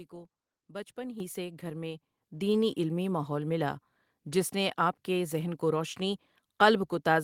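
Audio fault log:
1.2 s and 2.22 s, microphone volume stepped up: the input level jumps about 8 dB, then about 5 dB more, each in a single step as the software raises the device volume. Background noise rises with the speech, which rules out a speaker moving closer.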